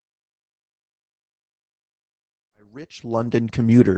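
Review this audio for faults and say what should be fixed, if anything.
Opus voice compression runs throughout the speech. The band stops at 8.7 kHz, and coarse SILK linear-prediction coding of the excitation makes the voice muffled, hoarse and slightly robotic, which fits a wideband encode at roughly 12 kbps. The smooth fade-in from around 2.5 s to 3.88 s is intended. To prevent the codec damage, encode at a higher Opus bitrate or keep an uncompressed source.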